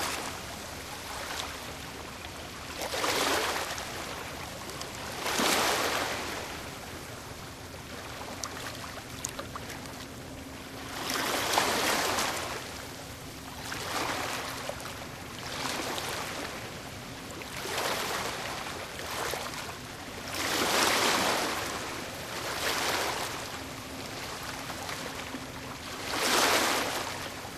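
Brief garbled flutters occur at 5.40–5.45 s, 7.35–7.45 s, 9.88–9.97 s and 23.18–23.24 s. These are frames out of order: two adjacent blocks of about 23 ms (at 7.35 and 9.88 s, about 46 ms each) play swapped, without losing time.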